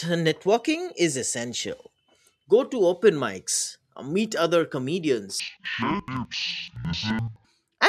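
From 5.40 to 7.48 s, interleaved audio read as planar drops the speech an octave low, doubled and choppy, stuttering at 11.7 Hz across 85 ms blocks.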